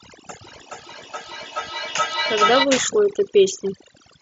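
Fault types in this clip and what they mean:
Overdone noise removal: Noise reduction is set far too strong for the whole clip. Frequency bands near its noise estimate are cut away, and quiet parts of the speech go with them. The background drops and breaks up into twinkling specks.
Feedback howl: From 0.43 to 2.71 s, sound loops from loudspeaker to microphone and gains level on each trip. It narrows to a tone around 1.5 kHz, with the loop repeating roughly every 0.4 s. At its peak it sits about 4 dB below the speech.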